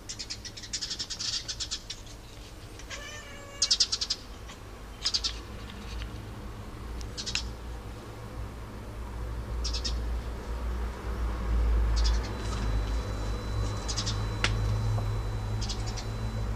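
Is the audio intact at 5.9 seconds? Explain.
Yes, the audio at 5.9 seconds plays through cleanly with no audible fault at that moment.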